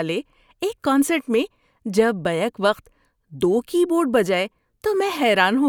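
Spoken audio makes up the clip, and there is nothing technically wrong with it. No defect can be heard at any point, so there are no times or causes to report.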